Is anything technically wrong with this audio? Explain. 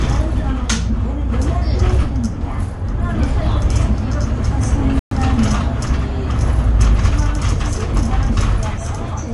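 Yes, two faults. Throughout, the sound is plainly watery and swirly, with smeared attacks. This is likely MP3 compression at a starved bitrate, consistent with roughly 48 kbps, where the encoder cuts the treble and drops weak frequency components frame to frame.

At 4.99 s the audio falls silent for 120 ms, resuming at 5.11 s. This is a playback stall: the player likely ran short of data or was blocked, so output stopped until it recovered.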